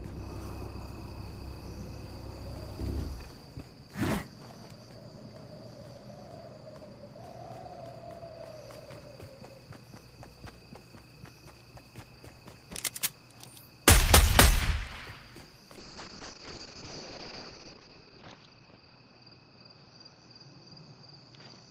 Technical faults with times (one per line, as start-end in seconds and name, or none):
15.78-21.70 call bitrate drop